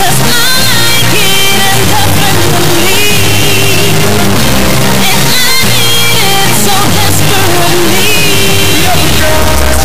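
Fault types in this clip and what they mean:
integer read as float: A harsh, extremely loud buzzing square wave runs through the whole clip, snapping between silence and the clipping limit and dropping out in the quietest passages. The 32-bit integer samples are being read as 32-bit floats, so most values land near zero or far beyond full scale.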